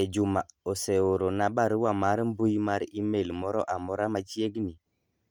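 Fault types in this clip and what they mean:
Bluetooth LC3 compression: The speech has a plainly audible grainy, breathy edge running through the whole clip. That texture is likely from the LC3 codec used for Bluetooth LE Audio, which codes sound in short transform frames, here consistent with 10 ms, and fills thinned-out upper detail with noise. The damage level fits a bitrate around 48 kbps. The band itself stays wide, with content reaching up to about 20.1 kHz.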